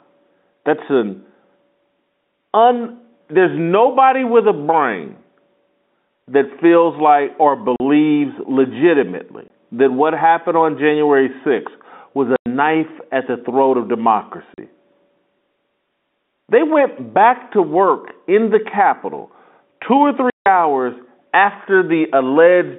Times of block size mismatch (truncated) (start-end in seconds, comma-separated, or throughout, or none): none